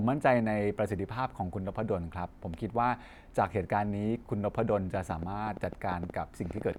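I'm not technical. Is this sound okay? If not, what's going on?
No. Something is likely injecting a rapid series of electrical pulses, such as interference from nearby equipment or a faulty connection or power supply, causing a train of clicks from 4.95 to 6.77 s: about fifteen sharp ticks, roughly eight per second at an uneven pace, heard over the speech and in its pauses.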